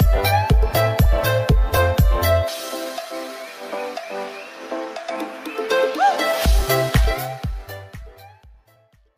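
No technical faults are audible.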